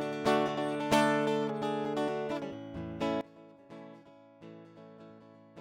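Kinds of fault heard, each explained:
Sudden gain jump: at 3.21 s the music drops about 20 dB in one step with no fade, likely a gain setting or bit shift applied instantly, and stays down to the end.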